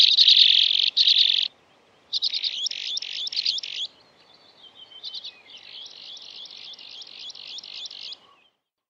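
The sound carries a doubled audio track from the very start until 1.48 s. It is already under way when the clip begins. A second full-band copy trails the original by roughly 0.7 s. It sits about 5 dB quieter. It has no decay and no room colour, so it reads as a flat repeat, not an echo. At 1.48 s the copy cuts out abruptly. The likely cause is a second, slower capture path or an edit leaving two offset copies in the mix.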